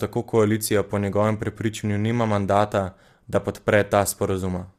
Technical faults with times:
0.00-4.79 low-delay AAC compression

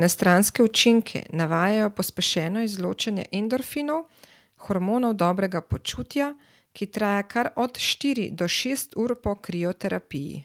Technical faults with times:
1.02 microphone volume stepped down

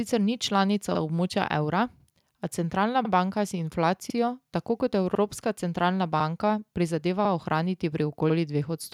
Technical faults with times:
0.95-1.00 overlapping chunks
2.00-2.05 overlapping chunks
3.05-3.10 overlapping chunks
4.10-4.15 overlapping chunks
5.15-5.20 overlapping chunks
6.20-6.25 overlapping chunks
7.25-7.30 overlapping chunks
8.30-8.35 overlapping chunks

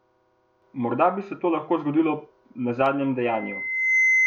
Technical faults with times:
3.21-4.27 loudspeaker feedback squeal

